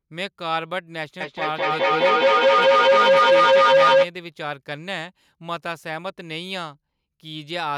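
A speech recording with feedback howl from 1.2 to 4.1 s: a loop between two devices sharing a room swells into a tone near 500 Hz, pulsing about every fifth of a second and peaking about 13 dB above the speech. A spectrogram shows one bright horizontal band; the waveform balloons.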